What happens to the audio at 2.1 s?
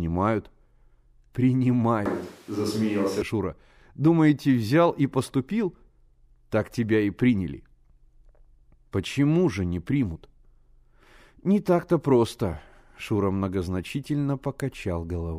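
At 2.06 s the recording likely loses the close microphone's signal and falls back on a distant one, a switch to a distant microphone that lasts until 3.22 s, when the close pickup returns just as abruptly. Across that stretch the speech turns suddenly roomy and hollow, thinner in the bass, with background noise rising to roughly 30 dB below the speech, though the overall level barely changes.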